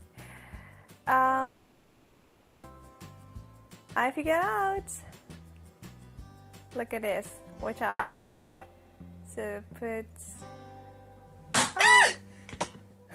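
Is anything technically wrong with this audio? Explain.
Yes. There is a long network dropout from 1.41 to 2.65 s and another from 7.89 to 8.63 s. In each, the original audio vanishes and is replaced by a synthetic continuation of the last sound, a smeared buzz or hiss. The first fill lasts about 1.22 s with no silence. The second lasts about 0.72 s, followed by a brief gap of roughly 30 ms before the audio resumes further along. The likely cause is lost packets concealed by the receiver, so the missing material never returns.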